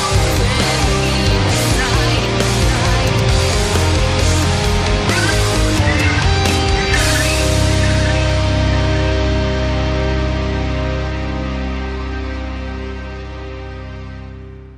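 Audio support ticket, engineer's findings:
No audible faults found.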